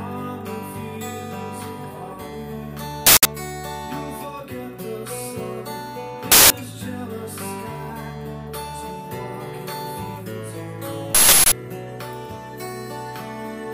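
Uninitialised buffer at 3.07–3.25 s, 6.32–6.50 s and 11.15–11.52 s: blocks were played before audio was written to them, producing harsh digital noise bursts. The first two last about 186 ms, which fits an 8192-sample buffer. The third lasts twice as long, which fits 16384 samples.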